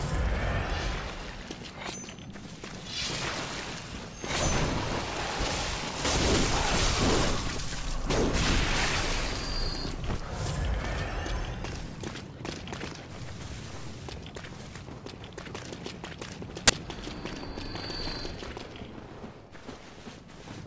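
File tags played as audio appear at 16.68 to 16.70 s, where an embedded cover picture's compressed data is read as if it were samples. Because compressed bytes look random, the 20 ms block comes out as very loud white noise, a hard-edged burst of static.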